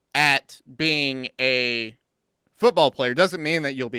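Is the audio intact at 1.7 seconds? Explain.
Yes, the speech at 1.7 seconds is intact, with no fault at that moment beyond the light coding of the Opus voice compression, which runs in its hybrid mode at about 20 kbps.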